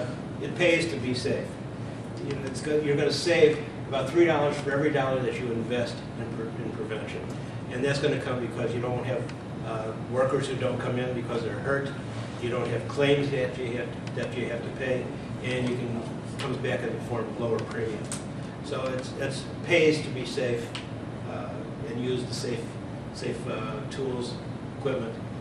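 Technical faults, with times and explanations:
Throughout: MP2 compression. The bit budget appears to have run short in an MPEG Layer II encoder, with the audio divided into 32 equal sub-bands that compete for too few bits, which fits a rate of about 80 kbps. Upper bands drop out and flicker back, so the top end sounds dull and unstable, and the bands that remain are coarsely quantised, giving a plainly audible gurgling, granular roughness. Heavy MP2 coding is the likely cause.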